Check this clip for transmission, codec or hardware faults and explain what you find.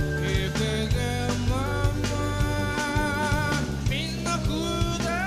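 Nothing faulty can be heard anywhere in this clip.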